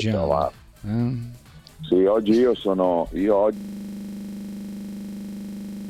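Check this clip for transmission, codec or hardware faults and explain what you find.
One hardware-level fault is present. From 3.57 s to the end, a system hang loop replays a single 40 ms fragment at 25 Hz: the driver froze while the ring buffer kept cycling. The result is a rasping buzz, visible as identical waveform blocks and evenly spaced vertical spectrogram striations.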